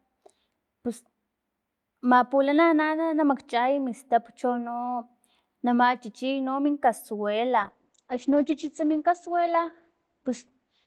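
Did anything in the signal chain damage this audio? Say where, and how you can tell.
Yes: a call bitrate drop at the codec stage. From 7.6 s to the end, the encoder falls from 64 to 10 kbps and the sound turns rough and watery while the top end shrinks from 20 kHz to 8 kHz. Unlike packet loss, there are no gaps or glitches, just sustained coarser coding.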